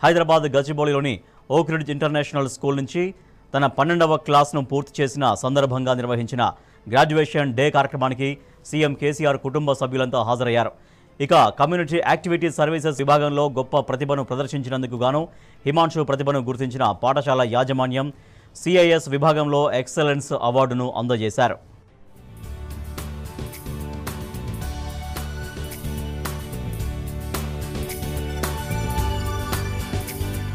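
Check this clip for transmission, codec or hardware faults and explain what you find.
One fault is present: damaged data in the compressed stream, from 12.96 to 12.99 s. For about 34 ms the decoder was handed corrupted bytes in place of valid compressed frames. It could not decode them correctly, lost frame sync and had to scan forward for the next valid frame header before normal output resumed. The result is a brief chirp, squawk, click or short hole.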